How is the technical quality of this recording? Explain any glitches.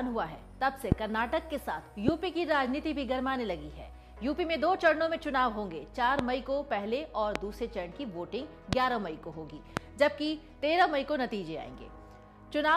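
The recording has a recurring loud pop problem, six of them in all. They land at 0.92–0.94, 2.08–2.11, 6.19–6.22, 7.36–7.38, 8.73–8.75 and 9.77–9.79 s. Each is a single sharp crack about 20 ms long that jumps roughly 20 dB above the surrounding level, while the sound carries on underneath. The likely cause is a sudden voltage spike, from a flaky connector, a switch, static or a driver hiccup, getting added straight onto the signal.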